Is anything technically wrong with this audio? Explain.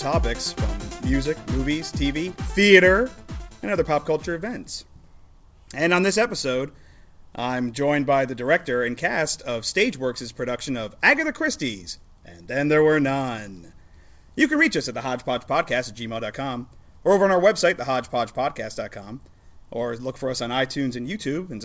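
No, nothing is technically wrong.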